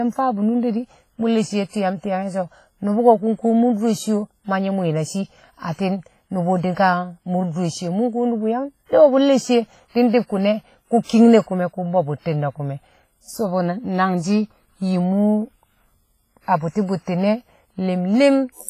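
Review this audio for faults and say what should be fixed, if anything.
Throughout the speech there is heavy transform-codec damage, likely WMA compression at a low bitrate, around 24 kbps. Quantisation noise smears across long blocks, giving a ringing, washy texture with hiss that breathes with the speech, and nothing is present above 15.3 kHz. Keep the master in a lossless format and, if compression is required, use a modern codec at a substantially higher bitrate.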